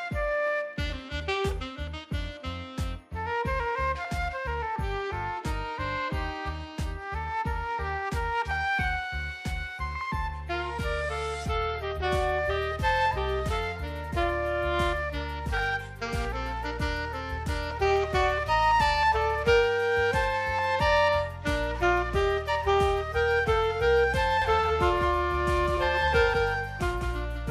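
At 24.42 s a doubled audio track begins abruptly and runs to the end: a full-band copy trails about a fifth of a second behind, somewhat quieter, with no decay. It's likely a second capture path. Waveform and spectrogram show every event repeated at that fixed offset.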